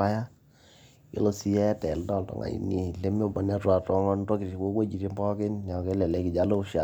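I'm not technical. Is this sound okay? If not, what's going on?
Yes, this sound is okay; nothing is going wrong with it.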